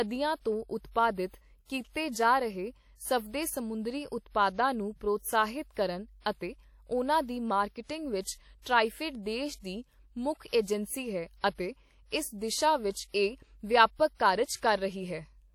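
Throughout the speech, there is plainly audible codec damage. It is likely WMA compression, and the damage fits a low bitrate near 48 kbps. Long transform blocks smear quantisation noise over tens of milliseconds. Transients ring, quiet detail washes out, and a hiss breathes with the signal.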